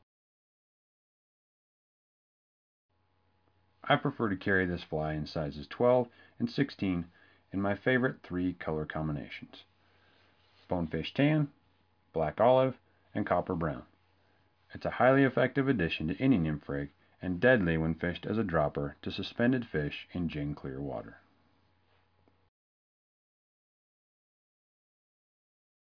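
No technical faults can be heard anywhere in the recording. Nothing interrupts or degrades the sound at any point.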